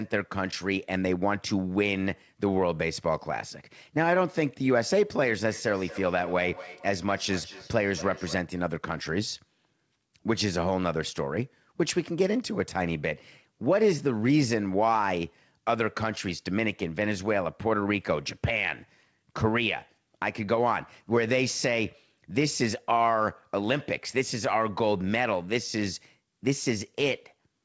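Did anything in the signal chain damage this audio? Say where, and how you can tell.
Yes: feedback echo between two devices, from 5.51 to 8.52 s, in the acoustic path around the call processing. Each phrase comes back at an interval of about a fifth of a second, thinner and more ringing each time, with the repeats peaking at about -16 dB relative to the speech. A second device in the room is playing the call and feeding it back into this microphone. The local echo canceller only removes what its own loudspeaker plays, so this loop passes through the G.722 path, which is band-limited to 8 kHz.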